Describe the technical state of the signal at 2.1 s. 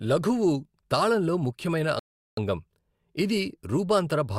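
At 2.1 s the signal is in a rebuffering stall, running from 1.99 s to 2.37 s. The player exhausted its downloaded audio and paused until more data arrived, so the speech drops to silence for about 0.38 s and then picks up exactly where it left off. That distinguishes it from a dropout: no syllable is skipped or clipped, the gap is simply inserted, and the clip runs longer by that amount.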